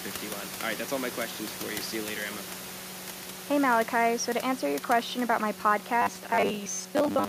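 Speech recording, with room noise sitting about 15 dB below the talker. From 6.02 s to 7.29 s, just after "your question about my", audio likely arrives too seldom, so roughly half the time is filled by repeating a 10 ms buffer. The result is robotic sound from repeated short buffers, a rigid metallic 100 Hz buzz.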